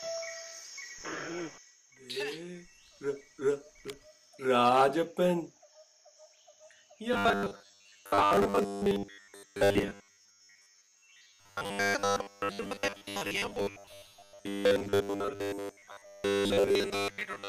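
From 7.13 s to the end of the clip, the audio turns robotic. A rigid, metallic buzz sits at a fixed pitch of 100 Hz. The sound still follows its original contour loosely, but it loses its natural movement. The cause is likely robotic sound from repeated short buffers. New audio arrives too late, so the same 10 ms slice plays again and again. Roughly 70 percent of the time is filled this way, and the real audio underneath is skipped.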